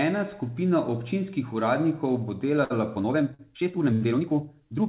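Just after "skupina občinskih uradnikov bo", at 2.64 to 2.72 s, a short stall from a late packet holds the sound with a slight buzz or dip but skips nothing, unlike a dropout. From 2.93 s to the end the pace jumps to about 1.83 times speed, rushed at unchanged pitch, which unlike a fast-forward keeps the pitch steady and is likely a time-stretched section. Two more stalls, at 3.34 to 3.41 s and 3.93 to 4.03 s, hold sounds again over the G.711 call path's 4 kHz-limited band.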